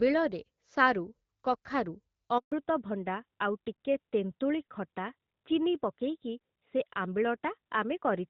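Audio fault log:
2.38 to 2.52 s, handover gap: the sound fades out within a few tens of milliseconds and stays silent for 140 ms before resuming. This is the network switch: during the transfer between networks no frames reached the decoder, so that stretch is simply missing. Unlike a dropout from packet loss, there is no filled-in or smeared concealment sound, only a clean hole. The character of the audio also changes immediately afterwards.
2.52 s to end, fallback to narrowband: from the moment the gap closes, everything above 4 kHz is gone, so sibilants lose their edge and the sound turns duller and rougher. Before the gap, the clear wideband sound with only light coding damage fits HD Voice at around 12.65 kbit/s. The abrupt, permanent cut at the handover, rather than a gradual low-pass or a brief quality dip, points to the call renegotiating onto a narrowband codec near 12.2 kbit/s.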